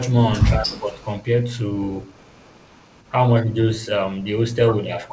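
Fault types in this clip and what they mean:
Speech suppressed in double talk: the voice dips by roughly 15 dB around 0.55 to 1.0 s and briefly by about 5 dB near 4.84 s, likely an echo canceller ducking the near talker while both sides spoke at once, unable to separate it from loudspeaker echo.
Echo leak: a faint delayed copy of the voice trails it by 151 ms, about 35 to 40 dB down, longest from 2.01 to 3.11 s, with short scraps near 0.76 s and 3.73 s, likely residual loudspeaker pickup an echo canceller failed to remove.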